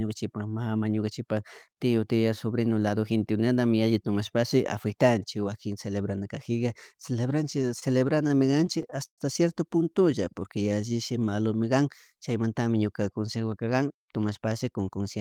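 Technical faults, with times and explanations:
7.50–9.19 s, repeated stalls (stutter): Across this span the playback stops and restarts 20 times, because packets arrived late or slower than real time and the jitter buffer kept running dry. At each gap the receiver extended the last sound, about 332 ms in all and roughly a fifth of the span. The longest hold, 126 ms, is faded down. Nothing is lost, but the speech drags and stutters.
9.83–11.61 s, jitter buffer slow-down: The speech plays at about 88% of normal speed while keeping its pitch, which stretches vowels and pauses. The buffer had run low, or its target delay had just been raised, so the receiver repeated single pitch periods and fragments of silence many times in succession. That inserted 214 ms of material and rebuilt the reserve.
13.44–15.17 s, jitter buffer speed-up: The speech runs at about 108% of normal speed with unchanged pitch and sounds rushed. 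The buffer was holding more audio than its target, the typical result of delayed packets arriving in a burst. To bring latency down, the receiver cut out short segments one or a few pitch periods long, over and over. In total about 150 ms was removed across the span.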